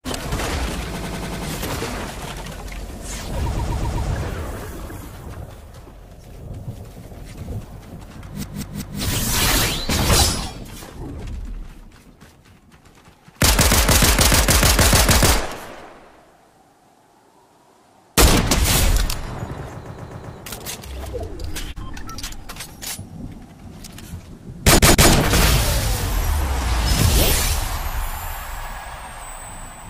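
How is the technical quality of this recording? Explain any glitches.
The recording has five stutters from repeated frames. Short blocks of audio replay back to back. At 0.98 to 1.46 s a 96 ms block plays five extra times. At 3.57 to 4.08 s and 19.86 to 20.37 s, 128 ms blocks repeat four times. At 8.43 to 9.01 s, a 192 ms block repeats three times. At 24.78 to 25.10 s, a 160 ms block repeats twice. Compressed frames were sent more than once, so the decoder replayed them. Each stutter lengthens the audio by 0.32 to 0.58 s.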